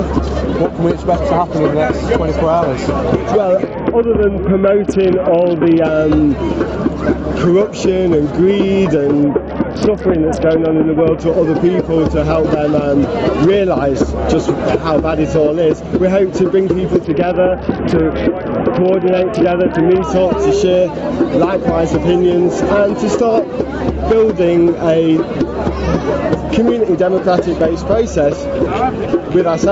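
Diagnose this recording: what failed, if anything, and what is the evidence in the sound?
Gain pumping runs through the whole recording. The input gain is likely set far too high, so a fast limiter clamps down on every loud sound. The gain swings by around 10 dB, which squashes the dynamics.

A Bluetooth SBC bit pool drop hits the wireless codec link three times: 3.66 to 5.85 s, 9.23 to 11.2 s and 17.04 to 20.04 s. The sound fits the phone cutting the bit pool from 31 to about 7, near 61 kbps. With so few bits the upper sub-bands go starved and the rest are coarsely quantised, so the treble dulls and a gritty noise rises until the rate recovers. The call processing's band limit, with nothing above 8 kHz, stays constant outside these windows.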